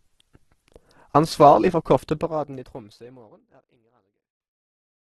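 Opus compression runs through the whole speech clip, from start to end. The signal stops dead at 12.2 kHz, and the speech has a grainy, rough, noisy texture rather than a swirl. That texture likely comes from Opus in its CELT music mode at a very low rate, which fits roughly 12 kbps. Short of bits, the encoder keeps each band's energy but fills its detail with folded or noise content. The damage is heavy, and the clip fades out smoothly from about 2 s to the end.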